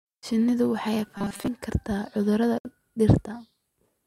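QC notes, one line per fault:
1.18–1.48 s, robotic sound from repeated short buffers: a rigid metallic buzz at 200 Hz over most of the stretch, likely a 5 ms slice repeated while new audio arrived too late.
2.58–2.65 s, gap at a join of encoded pieces: a 66 ms gap with smeared edges, then the speech resumes. Separately encoded pieces were joined with their start delay and end padding untrimmed.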